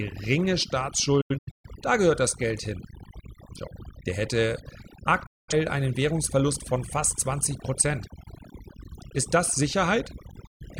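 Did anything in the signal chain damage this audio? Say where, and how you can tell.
Yes. Overdone noise removal throughout, in a processing stage: the background is near silence with twinkling specks. On a spectrogram, it appears as scattered isolated bins.

A digital broadcast dropout at the reception or decoding stage mutes the audio at 1.21–1.70 s (several short holes, the longest about 128 ms, before "da gehört das"), 5.26–5.54 s and 10.47–10.66 s. The waveform shows flat gaps with brief fades.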